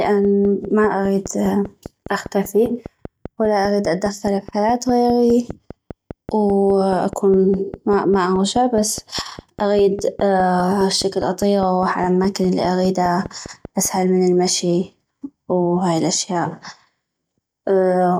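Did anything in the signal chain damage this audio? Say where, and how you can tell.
Yes. A train of clicks runs through the speech from 0.05 s to 13.86 s: about 70 near-identical pulses at a steady 4.9 per second, peaking around 5 dB above the speech and ticking through the pauses as well. Identical shape and regular spacing point to something outside the audio injecting a pulse on a fixed cycle, likely interference coupling into the analogue wiring from nearby equipment, or a faulty connection or power supply.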